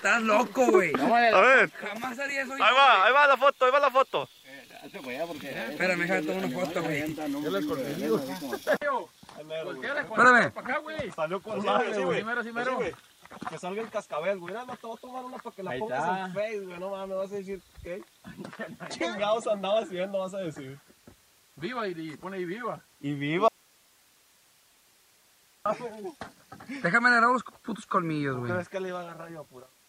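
An audio dropout to a faint residue runs from 23.48 to 25.66 s. The signal vanishes abruptly for about 2.2 s, leaving only hiss roughly 35 dB down, likely from a lost feed with a still-live path.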